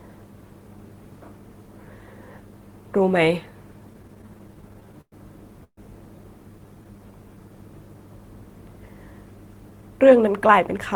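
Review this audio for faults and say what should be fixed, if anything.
From 3.93 to 5.14 s the speech shows repeated stalls (stutter): 15 short gaps, the longest 108 ms, are filled with continued sound. Unlike a single freeze, it drags in many small hitches.

Between 5.64 and 5.79 s there is a call audio freeze. The last sound is held for 134 ms and fades to 70 ms of silence, then the speech resumes with nothing missing. The likely cause is packets held up until the jitter buffer ran dry. It is one longer hold rather than a chain of hitches.

From 6.52 to 7.56 s a jitter buffer slow-down stretches the speech to 91% speed, adding 101 ms by repeating pitch periods. The pitch stays the same, which separates it from a tape-style slowdown.

From 9.47 to 10.95 s a jitter buffer speed-up runs the speech at 108%, trimming about 150 ms of pitch periods. It sounds hurried with pitch unchanged, the opposite of the earlier stretch.

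Stabilising network delay, or giving the jitter buffer a steadier, slightly larger target, would prevent all four.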